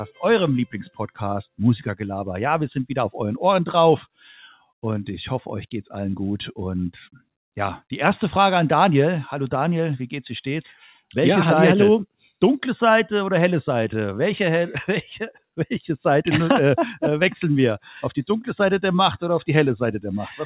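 A noise suppressor designed for speech stayed active across the whole clip and treated steady tones, ambience and decaying tails as noise. The level therefore swings by around 5 dB as sustained parts are pulled down and attacks pass, so the sound pumps and thins.

The same suppressor then misjudged individual moments as noise and cut them hard. From 0.88 to 1.19 s the level drops by about 18 dB, from 4.02 to 4.31 s by about 19 dB, and from 4.51 to 4.71 s by about 15 dB. Each event sounds like a brief dip or hole where held sound sinks and its decay is cut short. All of this sits inside the narrow band of a G.711 mu-law call path, with nothing above 4 kHz.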